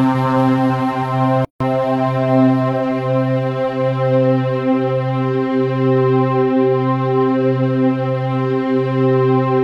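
At 1.45 s there is a gap at a join of encoded pieces: 0.16 s of untrimmed encoder padding. Unlike a dropout, the sound resumes exactly where it stopped.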